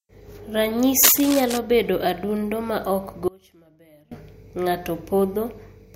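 It's a speech clip with two faults. From 1.03 to 1.58 s, just before "bedo adundo ma ok," there's cable scratch noise: rough, uneven rustling nearly as loud as the speech, likely from a worn lead or connector being moved. Then right after "bedo adundo ma ok," from 3.28 to 4.11 s, there's an audio dropout to a faint residue: the speech abruptly vanishes for about 0.83 s, leaving only faint sound roughly 25 dB down, likely a broken signal path while the chain after it stayed live.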